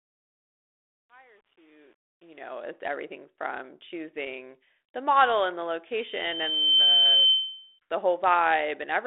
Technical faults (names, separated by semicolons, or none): truncation distortion on a fade; loudspeaker feedback squeal